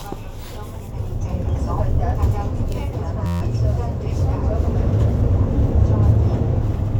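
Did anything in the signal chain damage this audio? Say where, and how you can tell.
Yes, a system hang loop in the driver buffer. From 3.26 to 3.41 s, an 11.61 ms slice repeats as a steady 86.1 Hz buzz, which fits a 512-sample buffer stuck cycling.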